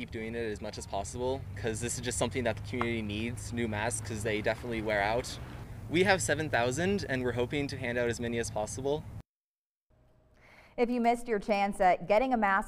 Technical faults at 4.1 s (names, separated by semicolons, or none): none